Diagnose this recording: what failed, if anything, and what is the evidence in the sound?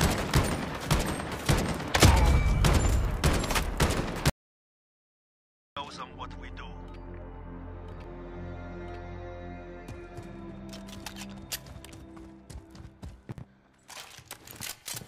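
From 4.30 to 5.77 s the sound cuts off abruptly and about 1.47 s of digital silence follows, with no room tone at all. That marks an audio dropout to silence at the input stage, likely a lost device link or stray mute, with silence written meanwhile. A noise gate would fade rather than hard-cut.

At 7.92 to 8.04 s and again at 13.32 to 13.44 s there are brief jumbled moments. These are chunks out of order in the buffer or network stage: one 60 ms block plays one slot late. Unlike packet loss, nothing is missing; the material is only rearranged.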